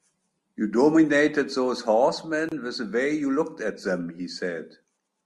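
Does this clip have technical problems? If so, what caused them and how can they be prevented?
Yes: a gap at a join of encoded pieces, 2.49 to 2.52 s, a 28 ms silence from untrimmed encoder delay and padding, visible as a blank vertical stripe. Trim encoder delay and padding before joining, or encode continuously.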